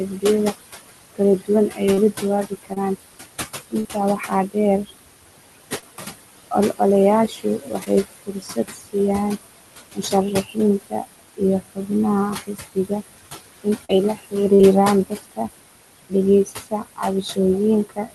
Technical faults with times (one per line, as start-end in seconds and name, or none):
0.00-18.15 noise suppressor artifacts
0.10-14.34 speech cut by the noise suppressor
1.94-1.98 short concealed packet loss
2.74-2.77 short concealed packet loss
3.80-3.86 short concealed packet loss
5.80-5.83 short concealed packet loss
7.84-7.87 short concealed packet loss
13.85-13.90 short concealed packet loss
14.55-14.60 short concealed packet loss
15.05-18.15 speech cut by the noise suppressor